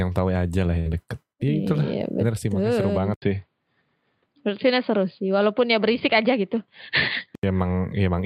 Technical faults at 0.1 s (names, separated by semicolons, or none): none